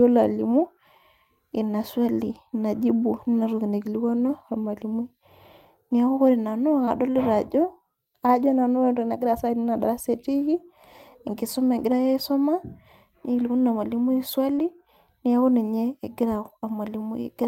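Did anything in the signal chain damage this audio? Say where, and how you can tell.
Yes, two brief smears in the speech, at 6.85 to 6.89 s and 14.55 to 14.59 s, are short concealed packet loss at the network stage. Each sounds like a tiny wobble where the sound briefly stops being real. In each case about 20 ms of audio never arrived in time, so the decoder filled the gap by extending the preceding sound, for about 16 ms in the first and 21 ms in the second, then blended back into the received stream.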